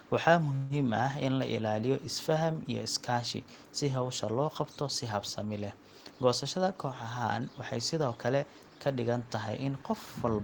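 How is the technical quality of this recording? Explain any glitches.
The recording has two glitches, one near the start and one late in the clip.

From 0.55 to 0.73 s there's a call audio freeze. The speech stalls and the last bit of sound is stretched into a fading buzz or hiss for about 148 ms before things pick up exactly where they left off. Nothing is lost; a gap is just wedged in. Packets were likely held up in transit, so the jitter buffer ran dry and the receiver had to improvise until they arrived, leaving playback 148 ms further behind.

From 6.57 to 8.44 s there's a jitter buffer speed-up. The speech runs at about 107% of its normal pace with the pitch unchanged, so it comes across a bit hurried. That's the receiver catching up on the backlog. With more audio queued than it wants, it repeatedly snips out tiny pitch-period-sized pieces, trimming roughly 150 ms in total to bring the delay back down.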